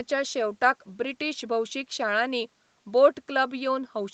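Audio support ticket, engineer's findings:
Nothing stood out on listening to the speech, whose top end stops at 8 kHz as the call path's band limit leaves it.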